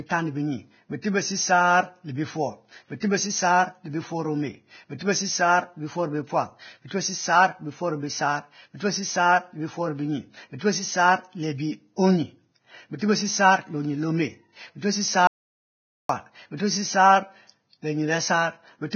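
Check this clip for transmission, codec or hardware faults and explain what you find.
Three faults are audible: heavy codec damage throughout, six pre-echo smears, and one gap of dead silence.

Vorbis compression: Across the whole recording the speech sounds hissy and grainy, with a dull top and nothing above about 6.6 kHz. The hiss is likely from heavy Vorbis encoding at a low bitrate, consistent with roughly 18 kbps. At that setting the encoder lowers its cut-off and quantises the remaining treble so coarsely that fine detail is replaced by noise of similar energy. That is why sibilants and breathy sounds turn rough and consonant onsets lose their edge.

Pre-echo: Brief hissy smears come just before sharp attacks at 1.02, 3.00, 4.98, 6.87, 12.99 and 16.57 s, each lasting 20 to 35 ms. The codec spreads its quantisation noise evenly across a transform block. When a sudden loud onset lands late in a block, noise sized for that loud part also fills the quiet moment before it. 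Each attack therefore arrives softened and smeared, preceded by a short hiss.

Audio dropout to silence: From 15.27 to 16.09 s the sound cuts off completely for about 0.82 s and then resumes mid-flow. The gap is silent with no room tone. This points to the input being lost, likely through a disconnection, a failed link or a momentary mute, while the recorder kept writing silence. Whatever was spoken during that stretch is gone.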